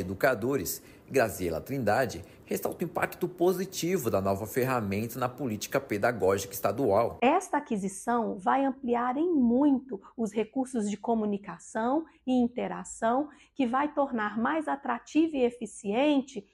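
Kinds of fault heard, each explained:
No faults can be heard.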